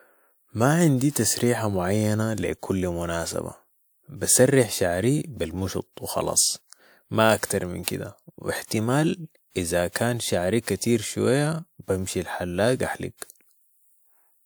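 At 1.11 s, 7.45 s and 7.83 s, pre-echo smears sharp speech attacks. The codec spread its quantisation noise across each block. About 45 to 48 ms of hiss arrives before each onset. The attacks themselves sound soft and blurred.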